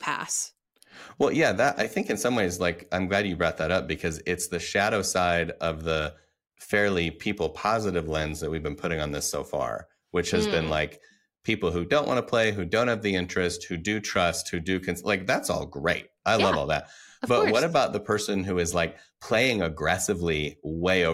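A speech recording with nothing technically wrong with it, so there are no times or causes to report.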